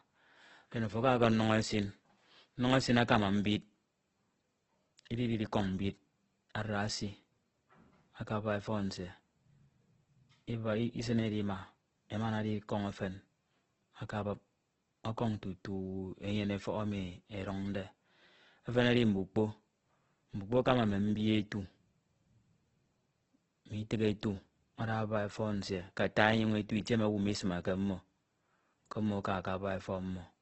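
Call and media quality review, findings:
Likely Opus compression at a starved rate, consistent with about 12 kbps in music mode: nothing above 8.2 kHz throughout. Speech grainy, rough, noisy rather than swirly.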